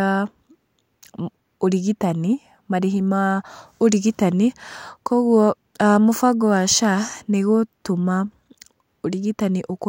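No technical faults can be heard anywhere in this speech recording.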